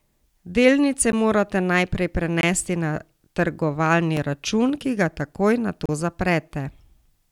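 At 1.12 s, 2.41–2.43 s, 4.17 s and 5.86–5.89 s the speech drops to a block of digital silence, with hard edges, likely where output wasn't filled in time; the first two gaps are 512 and 1024 samples long. Unlike concealed packet loss, nothing fills or fades the gap.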